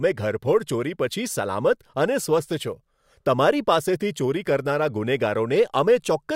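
No technical faults can be heard anywhere in the speech recording. Nothing at any point calls for a timestamp.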